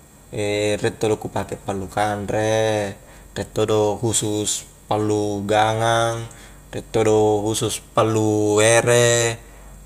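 No technical faults can be heard anywhere in the recording; the speech signal stays continuous and steady throughout.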